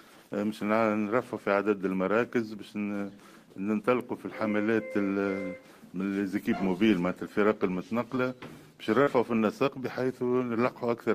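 Brief smears in the audio at 8.15–8.18 s and 9.02–9.09 s are short concealed packet loss. About 20 ms and then 40 ms of the stream arrived too late to decode, so the receiver extended the preceding sound to cover each gap before blending back in.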